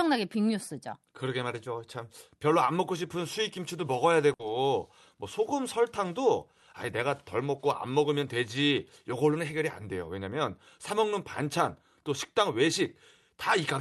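At 4.33 to 4.42 s, a burst of packet loss stalls the Opus call stream: the receiver fills a 60 ms gap by continuing the last sound and fading it down, then skips ahead past the 60 ms that never arrived.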